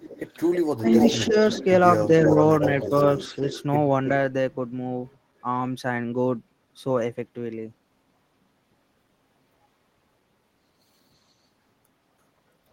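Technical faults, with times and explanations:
0.00–0.32 s, 0.86–1.64 s and 2.05–3.63 s, echo leak: The far end's echo canceller likely failed to remove its loudspeaker pickup and sent it back. A copy of the speech trails by about 325 ms. It is faint at first, then nearly as loud as the speech, then roughly 10 dB down.
0.76–0.86 s, 1.17–1.61 s and 2.07–2.34 s, speech suppressed in double talk: With both sides talking, the echo canceller likely could not separate local speech from echo, so it turned both down. The speech dips by roughly 20 dB in the first spot and by a few dB in the other two.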